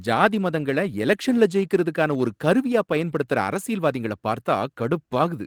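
The speech carries no technical faults, and its Opus voice compression at 24 kbps runs in hybrid mode with the full band intact up to about 20.2 kHz and only a light trace of coding texture.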